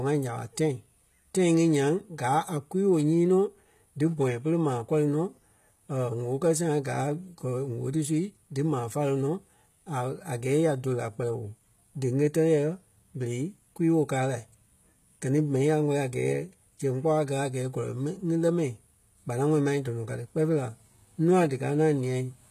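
Throughout the speech, the treble sounds synthetic and gritty, with nothing above 14.9 kHz. This is likely HE-AAC compression, rebuilding highs from copied lower bands at a very low bitrate.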